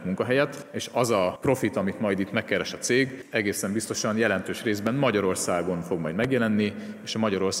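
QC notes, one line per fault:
4.87–4.89 s and 6.24–6.27 s, loud pop: two separate single pops, each lasting about 30 ms, jumping out roughly 10 dB and then about 15 dB above the surrounding sound, so the second is the stronger. The audio carries on underneath both. The likely cause is a sudden voltage step or pulse, say from a plug, switch, static or driver glitch, riding on the signal, with the downstream circuitry shaping it into that short thump.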